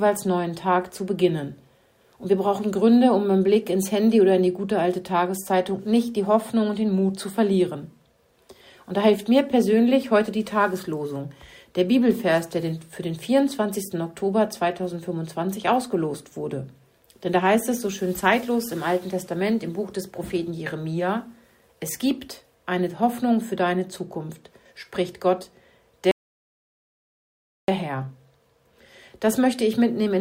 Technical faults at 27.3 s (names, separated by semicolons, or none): rebuffering stall